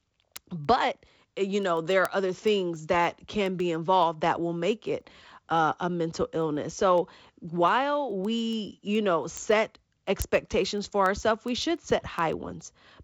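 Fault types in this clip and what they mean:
Word clock ticks: the receiving device runs on its own clock instead of locking to the sender's digital link, and the two drift apart by something like 150 parts per million. Each time they slip past each other, a single sample is dropped or repeated. In this speech clip that produces sharp ticks of uneven strength roughly every 0.15 s, around a hundred in all, from 0.23 s to 13.03 s, over wideband telephone sound that stops near 7.7 kHz.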